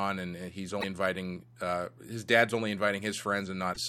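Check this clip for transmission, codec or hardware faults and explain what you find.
The clip, which is speech, has two bursts of damaged data in a compressed stream, at 0.77 to 0.84 s and at 3.70 to 3.77 s, each about 70 ms long. Corrupted bytes in the encoded stream make the decoder misread those frames and lose sync until it finds a valid frame header again, so each spot comes out as a brief chirp, squawk, click or short hole. Unlike a network dropout, which leaves silence or a smoothed-over gap, these come from the decoder misreading damaged frames.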